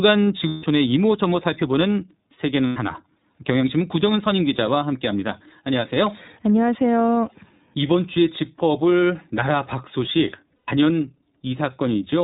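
iLBC codec damage runs through the whole speech clip: narrowband coding removes everything above 4 kHz and leaves a rough, synthetic edge, consistent with 30 ms frames at 13.33 kbps. Lost iLBC frames occur at 0.48–0.65 s, 2.67–2.77 s and 10.56–10.69 s, lasting 150, 90 and 120 ms. In each gap the decoder repeats the last pitch cycle with noise, producing a held, buzzy vowel, and the voice returns to normal almost immediately afterward.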